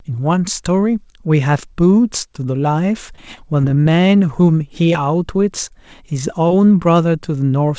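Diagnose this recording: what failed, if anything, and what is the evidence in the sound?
The network path dropped packets repeatedly between 3.16 and 3.87 s, eight separate gaps of up to 20 ms each. This is repeated packet loss (robotic sound). The decoder patched every hole by extending the preceding sound, so about 16% of that stretch is synthesised rather than transmitted. Because the patches come in quick succession, the speech turns choppy there, with small pieces missing. The audio carries nothing above 8 kHz, which fits a wideband call codec such as G.722.

Overlapping the end of that burst, the receiver's jitter buffer ran short and rebuilt its reserve. This is a jitter buffer slow-down from 3.69 to 4.08 s. The receiver repeated single pitch periods and small slices of pause, adding 44 ms in total, so the speech plays at about 90% speed with the pitch unchanged. The result is drawn-out syllables.

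Three isolated network drops follow, each short concealed packet loss of 20 ms: at 4.67 to 4.72 s, at 4.93 to 4.96 s, and at 6.48 to 6.52 s. In each case the decoder continued the last sound across the hole, then crossfaded back into real audio. At 4.93 s the patch also stretches the timeline by about 10 ms. Each heals as a brief smear or wobble, and a short consonant can disappear inside it.

At 5.68 to 5.72 s a packet arrived late rather than lost, and the jitter buffer briefly ran dry. This is a short stall from a late packet. The receiver held the last sound for 19 ms until the packet turned up, then resumed exactly where it stopped, adding 19 ms of delay. Nothing is lost, but one sound is held slightly too long, with a faint buzz or dip.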